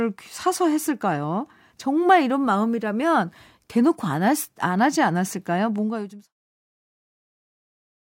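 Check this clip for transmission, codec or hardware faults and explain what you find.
No faults found; the closing fade-out is ordinary editing.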